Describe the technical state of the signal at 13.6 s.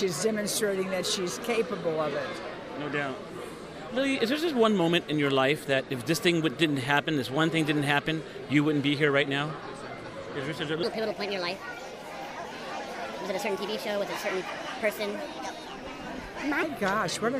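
At 13.6 s the signal sits inside a section at the wrong speed, running from 10.83 s to 16.63 s. That stretch plays back 1.37 times faster than it was captured, most likely from being clocked at the wrong rate during editing or playback, so pitch rises by roughly five semitones while timing hurries. On a spectrogram every harmonic and formant band shifts upward with wider spacing and events crowd closer together. The waveform shows its cycles and envelopes compressed in time.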